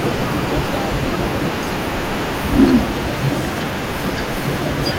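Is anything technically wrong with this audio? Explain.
No, no technical faults are audible.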